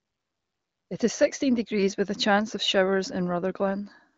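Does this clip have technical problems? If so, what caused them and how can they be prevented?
No, there are no technical problems to point to in this speech clip. It has been through an AMR wideband (HD Voice) codec at a rate that fits 18.25 kbit/s, and the only trace is the band limit, with nothing heard above about 7.1 kHz.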